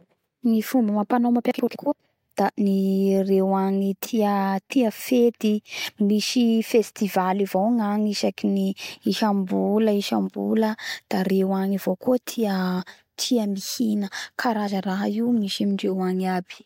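No technical faults can be heard anywhere in the recording.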